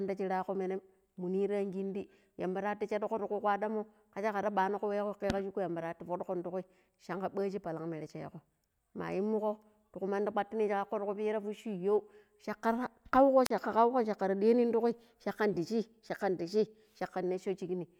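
At 13.45 s the speech briefly gives way to a burst of hiss and then a hole of near silence lasting about 40 ms, before the voice returns by 13.50 s. This is a wireless microphone squelch dropout: the FM radio link faded and the receiver's squelch muted its output.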